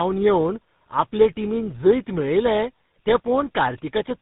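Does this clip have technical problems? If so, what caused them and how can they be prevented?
Yes. Tandem speech coding runs throughout. The speech sounds rough, muffled and warbly, with nothing above 3.8 kHz. This fits repeated coding through GSM full rate, CVSD and GSM again. Keeping one codec end to end, or passing coded frames through untouched, prevents this.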